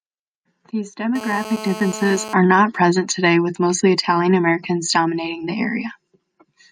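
A speech clip with two bursts of radio interference. From 1.16 to 2.34 s a hard, raspy buzz sits under the speech, about 13 dB below it, steady and harsh with a dense stack of harmonics above its 217 Hz fundamental, and it has nothing to do with what is being said. This is GSM phone buzz: a 2G handset nearby, active in a call, transmits radio pulses 217 times a second, and the audio circuitry rectifies them into an audible tone at that rate. Right after, from 2.44 to 3.16 s, the sound turns into an even pattern of ticks with a longer 217 Hz buzz twice a second, much fainter, around 25 dB below the speech. These are GSM signalling bursts. The same phone, still in its call but with its user silent, sends only occasional short groups of radio bursts, and the circuit rectifies each group into this ticking rhythm.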